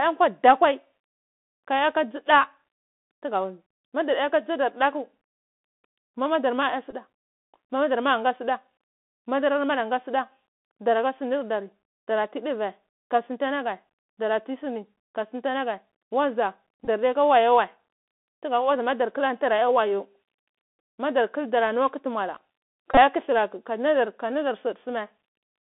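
Throughout, the Bluetooth CVSD headset codec confines the speech to roughly 250 Hz–3.5 kHz, adding granular hiss, scratchy sibilants and slope-overload distortion on loud passages. Bluetooth headset packet repeats occur at 6.91–6.94 s, 16.85–16.88 s and 22.91–22.97 s, just before "kudulrati ka": re-decoded packets replace lost audio (15, 22.5 and 48.8 ms), producing brief buzzy roughness.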